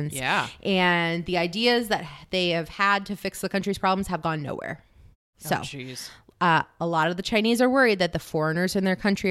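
Nothing here sounds broken: the background drops away to silence in the gaps between phrases and comes back in time for the speech, and no technical fault turns up anywhere in the recording.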